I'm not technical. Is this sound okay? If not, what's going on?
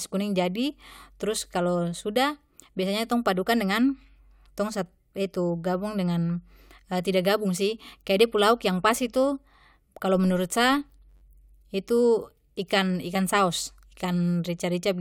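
No. From 10.14 to 11.23 s, a filter restarted on every block, losing its place each time, so a low 93.8 Hz buzz rides on the speech.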